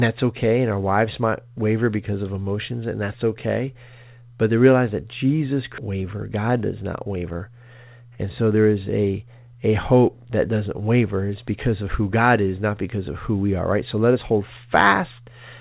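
At 5.78 s there's a skip ahead: roughly a second of speech got dropped and playback jumps straight across with no gap, so the two sides butt right together. Right after, from 5.88 to 7.86 s, you get a jitter buffer speed-up. The buffer was holding too much audio, so it kept snipping out tiny pitch-period chunks, around a fifth of a second in total. The speech runs at about 110% speed with the pitch unchanged and sounds a bit rushed. All of this sits on top of narrowband call audio with nothing above 4 kHz, which fits G.711 A-law at 64 kbps.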